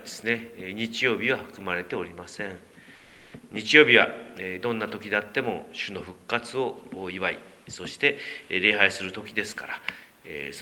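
From 2.95 s to 3.31 s, about 360 ms, the background loses its texture and turns into a flat, even hiss roughly 5 dB quieter, before the real background returns. This is comfort noise in place of the background. The likely cause is discontinuous transmission, which fits Opus DTX: the sender's detector judged that stretch inactive, stopped sending full audio, and the receiver filled the gap with generated noise shaped only roughly like the background.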